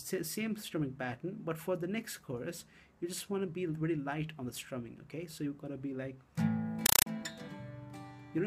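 From 6.86 to 7.06 s, a compressed stream played as audio: undecoded AC-3 data becomes loud static chattering in 5.33 ms bursts at 31.25 Hz.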